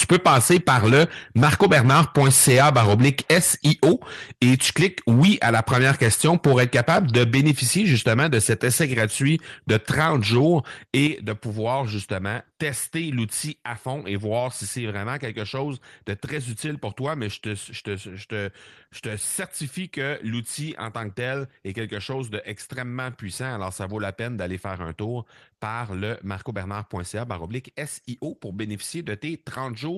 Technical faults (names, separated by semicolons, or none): microphone overload; microphone volume stepped down